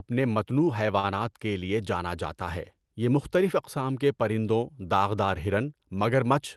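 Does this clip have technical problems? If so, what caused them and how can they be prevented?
Yes. A short stall from a late packet occurs at 0.99 to 1.05 s. A packet arrived late, the jitter buffer ran empty, and the receiver stretched the last sound for 41 ms until it came. No speech is lost, but the rest of the clip plays 41 ms later. A steadier network connection, or a jitter buffer that keeps a little more audio in reserve, would prevent this.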